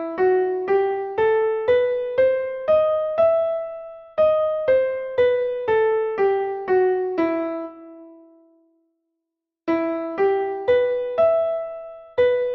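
No dropouts, clicks, distortion or timing errors turn up anywhere in the recording.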